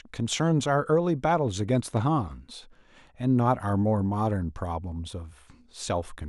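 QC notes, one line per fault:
No audible faults found.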